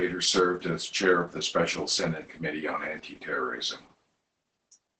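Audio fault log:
Throughout, Opus voice compression: the speech is muffled, hoarse and faintly robotic, the sign of the SILK linear-prediction coder working at a very low rate, which fits roughly 10 kbps. Nothing reaches above 8 kHz, so a spectrogram shows a flat ceiling there. Below it, the harmonics look smeared and grainy, because the excitation is coded coarsely in what sounds like 20 ms frames. The waveform shows the same softened, noisy texture over the whole clip.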